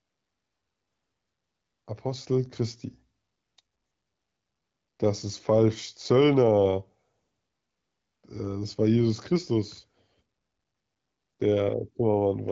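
No technical faults are audible.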